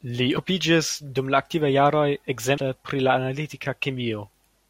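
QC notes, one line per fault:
0.37 s and 2.58 s (between "dum la aktivaj jaroj" and "pri la"): damaged data in a compressed stream; corrupted bytes break frame sync, so the decoder misreads them and emits brief blips while re-locking.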